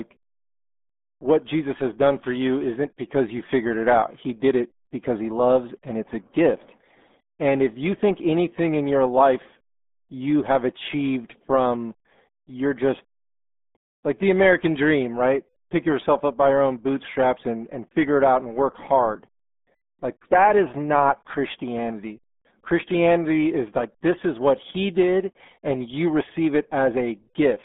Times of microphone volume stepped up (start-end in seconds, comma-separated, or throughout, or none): none